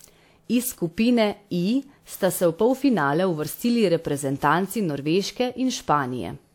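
From start to finish the speech has a swirly, hollow quality, with consonant attacks smeared and a watery churn that sounds worse than the bitrate alone would suggest, and nothing is present above about 19.3 kHz. This is generation loss, likely from repeated lossy encoding, about three passes of a WMA-style codec around 96 kbit/s. Each re-encode quantised on a shifted frame grid, so noise stacked up.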